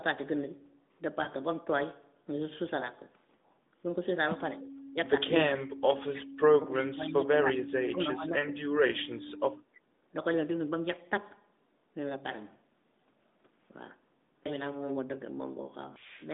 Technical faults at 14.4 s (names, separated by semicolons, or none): none